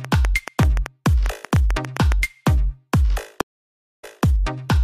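From 0.05 to 2.13 s, a train of clicks is likely caused by interference or a struggling interface injecting pulses into the signal. Around 15 similar clicks arrive at an uneven pace, averaging 6.75 per second and peaking about 10 dB above the sound, so they tick audibly over it.

At 3.41 s a stream reconnect occurs: the connection drops, playback goes silent for 618 ms, then a fresh decoder picks up mid-stream. The sound resumes 209 ms earlier than where it stopped, so a short stretch repeats before normal playback returns by 4.24 s.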